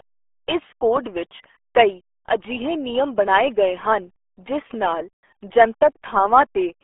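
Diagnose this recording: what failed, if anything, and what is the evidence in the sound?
Codec stage: the whole clip runs through RealAudio 14.4, with nothing above 3.7 kHz and heavy gargly smearing on the speech, which fits an 8 kbit/s dial-up codec.

Analogue stage: a phantom power thump hits at 4.74 to 4.91 s, right after "ਬਣਾਏ ਗਏ ਹਨ ਜਿਸ". It's a supply step through the coupling caps, decaying in about 38 ms.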